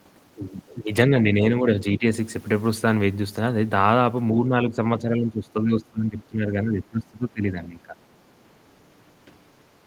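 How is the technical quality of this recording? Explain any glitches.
The speech is marred by repeated level dips. Speech suppressed in double talk occurs at 1.08–1.44, 1.6–1.75, 1.97–2.05, 4.46–4.8 and 4.98–7.95 s. The voice sinks by roughly 5 to 15 dB, deepest in the final three-second stretch. The likely cause is an echo canceller mistaking the talker for loudspeaker echo and turning it down. These show as notched troughs in the waveform envelope and fainter bands across the spectrogram.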